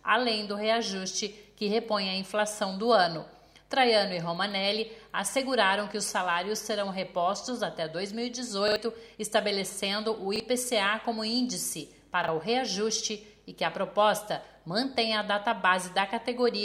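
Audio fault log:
8.68–8.76 s, 10.36–10.40 s, 12.24–12.28 s: repeated buffer. Each is a short stutter where the same slice of sound plays again back to back, with a hard seam at every repeat. The slice length points to a 40 ms buffer. At 8.68 s it sounds three times in all, and about 70 ms of the real sound is skipped. At 10.36 s and 12.24 s it repeats once, losing roughly 40 ms each time. What sets this apart from a dropout is that the gap is never silent: the stalled output refilled the hole with identical, already-heard material.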